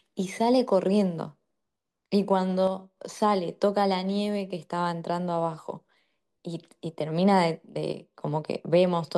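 One channel drops out at 2.67 to 2.97 s and again at 7.92 to 8.21 s: the speech abruptly falls about 6 dB for roughly 0.3 s each time, then snaps back, which is likely one stereo channel briefly going silent before the two are summed to mono.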